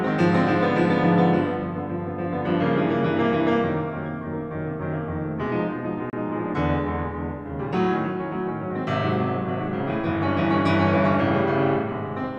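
At 6.10 to 6.13 s the music drops to silence for about 29 ms, then resumes. This is a Bluetooth stall, likely caused by interference delaying packets until the headphones' buffer emptied and playback waited for the retransmitted audio.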